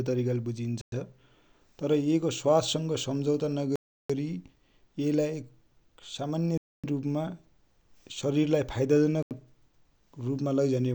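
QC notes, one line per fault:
0.81–0.92, 3.76–4.10, 6.58–6.84 and 9.23–9.31 s, Bluetooth stall: the speech drops to dead silence four times, for 109, 339, 261 and 83 ms, then resumes. This is likely a wireless link where interference delayed packets and the headphone buffer briefly ran empty.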